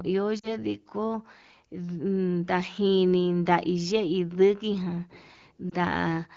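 A speech recording with a brief dip at 0.39–0.52 s and a shorter blip at 5.70–5.73 s: lost AMR speech frames, where the decoder concealed about two missing frames, then one, by repeating the last good settings at falling gain, heard over light HD Voice coding that fits AMR-WB at roughly 16 kbit/s.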